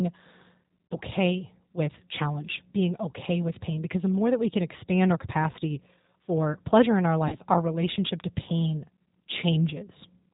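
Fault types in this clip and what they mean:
G.729 codec: 8 kbit/s speech coding throughout, making the speech audibly rough and synthetic. A spectrogram shows a hard ceiling with nothing above 4 kHz.
VoIP packet loss concealed by the speech codec: at 0.87, 5.52 and 7.28 s, sound stretches into a fading buzzy tone or coloured noise; waveform shows brief decaying, smeared patches about 40, 20 and 40 ms long.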